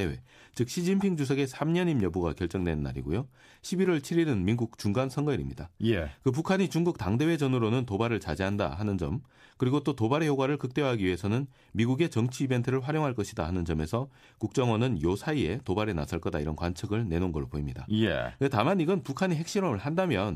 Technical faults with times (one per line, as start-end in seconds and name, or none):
none